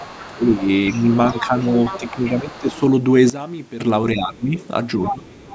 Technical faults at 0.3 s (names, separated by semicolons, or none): other side's voice leaking through; speech suppressed in double talk